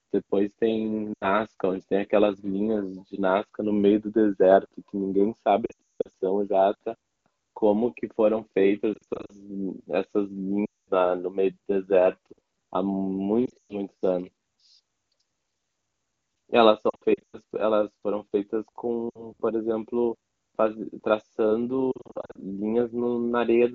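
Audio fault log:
1.13–1.29, 5.65–6.08, 8.94–9.32, 10.66–10.91, 13.46–13.74, 16.89–17.37, 19.09–19.30 and 21.92–22.38 s, lost AMR speech frames: corrupted wideband frames were replaced by repeating the last good pitch and vocal-tract settings at falling gain. Scattered losses warble and dip. The 180 ms run within 5.65–6.08 s drops to near silence within two frames before the sound returns roughly.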